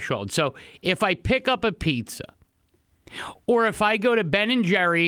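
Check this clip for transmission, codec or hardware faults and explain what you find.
Nothing in the signal points to a fault: the speech arrives continuous and at a steady level throughout.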